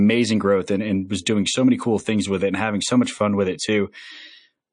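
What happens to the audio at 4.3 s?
At 4.3 s, as throughout, the speech sounds watery and swirly, likely from MP3 compression cutting the treble and dropping weak bands. A spectrogram shows a flat top edge and flickering holes.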